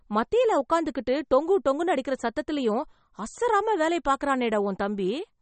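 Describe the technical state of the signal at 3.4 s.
At 3.4 s the speech sounds watery and swirly, with nothing above 8.4 kHz, as it does across the whole clip. That is likely MP3 compression at a bitrate near 32 kbps: starved of bits, the encoder cuts the treble and switches weak frequency lines on and off.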